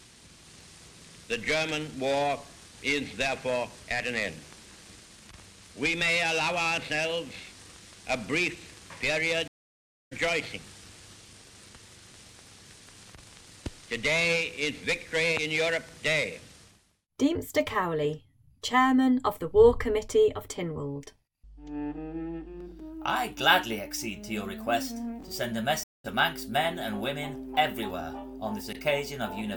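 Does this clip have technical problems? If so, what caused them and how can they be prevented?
Yes. Two stream reconnects: silence at 9.48 s for 0.64 s and at 25.83 s for 0.21 s. The connection dropped, a fresh decoder restarted mid-stream, and playback resumed roughly half a second and a fifth of a second later. A larger client buffer with seamless reconnection prevents this.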